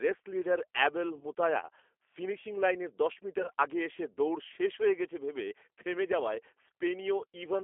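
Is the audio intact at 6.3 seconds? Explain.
No. G.729 codec damage runs through the whole clip, including 6.3 s. The speech is rebuilt from a vocal tract filter, pitch predictor and sparse pulses at a rate that fits 8 kbit/s, confined to 300 Hz to 3.4 kHz, so the damage is plainly audible: it sounds slightly rough, synthetic and narrowband.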